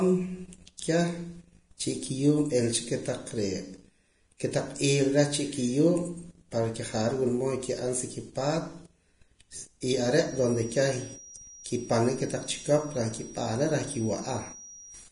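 The whole clip carries heavy damage that is likely Vorbis compression, at a rate that fits around 31 kbps. Nothing remains above 10.6 kHz. The treble is quantised so coarsely that its detail turns to noise. The speech sounds hissy and grainy.

Pre-echo appears at 0.77 s and again at 9.81 s. The codec spreads its quantisation noise across a whole block. When an attack lands late in that block, the noise leaks into the quiet moment before it. A short hiss comes first, and the attack sounds smeared.

From 10.19 s to the end, a feedback whistle sits behind the speech. It is a single tone at 5.7 kHz, about 20 dB below the speech. It slowly swells and fades. It is likely a loudspeaker-to-microphone loop ringing just short of a howl.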